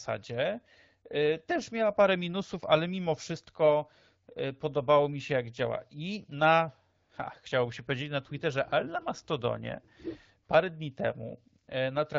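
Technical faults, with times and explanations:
7.03 to 7.09 s and 11.63 to 11.67 s, AMR comfort noise: speech frames stop for 60 and 40 ms, and smooth synthetic hiss replaces the real background instead of dropping to silence.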